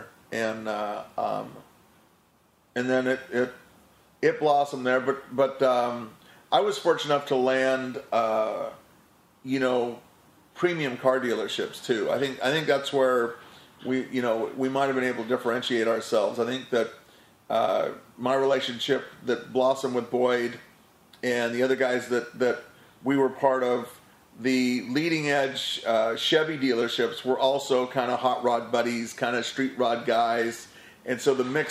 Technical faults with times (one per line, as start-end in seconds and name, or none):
none